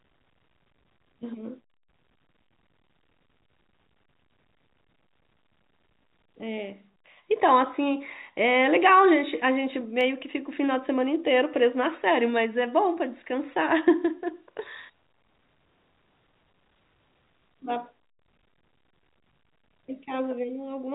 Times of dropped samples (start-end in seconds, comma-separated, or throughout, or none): 10.01